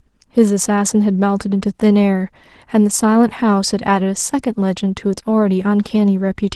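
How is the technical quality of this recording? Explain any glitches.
The technical quality of this speech recording holds up, with no glitches to explain beyond the ordinary band limit of a call codec topping out near 12 kHz.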